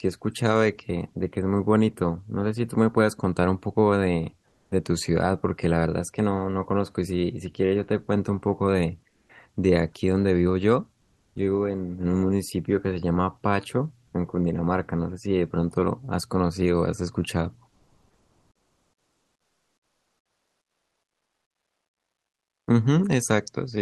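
At 4.47 to 4.71 s, 9.09 to 9.29 s, 11.01 to 11.35 s and 17.69 to 22.67 s, comfort noise in place of the background turns the pauses into steady, smoother noise, likely from Opus discontinuous transmission. The noise is about 2 dB louder in the first gap, and about 7, 5 and 3 dB quieter in the others. At 9.25 s the speech onset is clipped by the voice detector: about 40 ms is missing, likely because detection lagged, so the sound starts abruptly.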